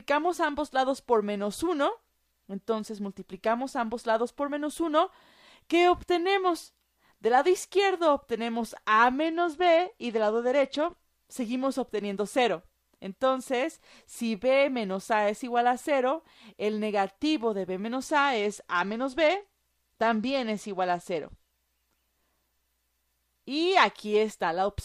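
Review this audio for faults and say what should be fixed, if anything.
Dull, gritty sound from 9.23 to 11.03 s and 18.08 to 21.51 s is a Bluetooth SBC bit pool drop, consistent with a congested link forcing bit pool 31 down to about 13, starving the treble sub-bands. Reducing radio congestion or interference, or locking the link to a fixed high bit pool, would prevent it.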